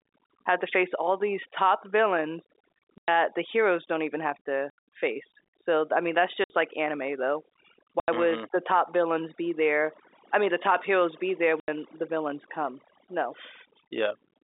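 Across the whole clip, overdone noise removal has pulled individual frequency bands down whenever they sat near the estimated noise floor. The background collapses to near silence with twinkling specks, and quieter parts of the speech are eaten away.

Packet loss filled with silence cuts five hard-edged holes: 2.98–3.08 s (100 ms), 4.7–4.78 s after "heroes don't even have", 6.44–6.5 s (60 ms), 8.0–8.08 s after "like anime though", and 11.6–11.68 s between "top heroes be there" and "the villains come". The gap lengths fit 20 ms packets. The narrow telephone band of the G.711 line is audible throughout.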